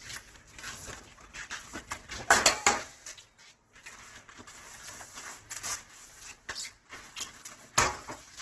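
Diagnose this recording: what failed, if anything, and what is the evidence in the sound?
Codec stage, throughout: grainy, rough, noisy texture with nothing above 12.1 kHz, likely Opus compression in its music mode, filling starved bands with noise, consistent with roughly 12 kbps.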